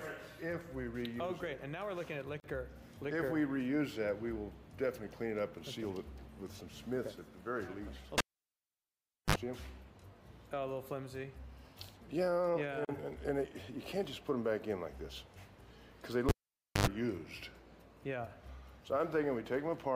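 At 2.40 to 2.44 s a sudden 40 ms silence cuts into continuous sound with smeared edges, then resumes where it stopped: a gap at a join of encoded pieces left untrimmed.

From 8.18 to 9.36 s a pop gives way to near silence for about 1.1 s, with a brief 52 ms burst of 50 Hz mains buzz and a second pop as the sound returns. This is a cable pulled and plugged in while live.

The same 40 ms join gap recurs from 12.85 to 12.89 s.

From 16.29 to 16.87 s the cable is pulled and plugged in again, with about 0.54 s of near silence and a 91 ms burst of 50 Hz buzz between the pops.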